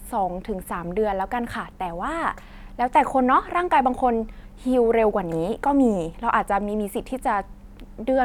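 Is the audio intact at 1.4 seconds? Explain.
Yes, at 1.4 s the speech plays through intact, with no dropout, click, distortion or other fault.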